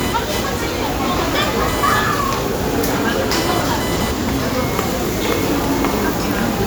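Shifting load in the computer's processor, graphics card or mouse disturbs the ground shared with the audio circuit, and that disturbance rides into the recording from start to finish as computer activity noise. It shows up as a buzzing, chirping texture pulsing at roughly a kilohertz, sitting only about 15 dB below the sounds captured. It rises and falls with the machine's workload rather than with anything in the recorded sound itself.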